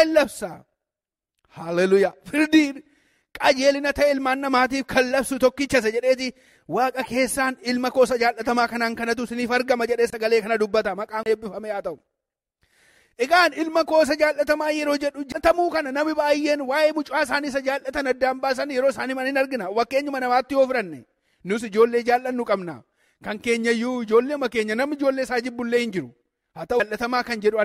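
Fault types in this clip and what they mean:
Corrupt frame decoded: A compressed frame got some bits flipped, and the decoder played it anyway, so misread gains and codes put energy where it doesn't belong. Here it's a single brief blip or squeak from 7.02 to 7.05 s, roughly 26 ms, which fits one damaged frame slipping through. It's short and sharp, the kind of thing you'd catch as a little chirp.
Corrupt frame muted: Here the decoder rejected a damaged frame outright and the player dropped silence into its slot instead. You hear it as an abrupt hole from 10.10 to 10.14 s, about 37 ms, which points to a single frame being thrown away. The timing carries on unchanged afterward, so the sound picks up where it should rather than jumping.
CD skip: A knock or disc flaw bumped the laser onto a different turn of the spiral, so the player mutes briefly and resumes from another spot. There are three: at 11.23 s with a mute of around 30 ms, at 15.32 s with around 15 ms, and at 26.80 s with only a couple of milliseconds. 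Each comes across as a tick or short gap followed by a sudden discontinuity in the audio.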